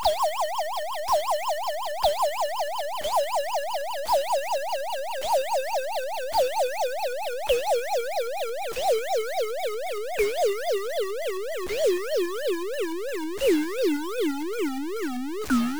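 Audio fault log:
Throughout: stuck bit, likely from a faulty converter or data line, adds harsh buzzy distortion over the sound and fills quiet gaps with noise at roughly 30 dB below full scale. The waveform shows a stepped offset flipping between levels, and the spectrogram shows broadband hash even in pauses.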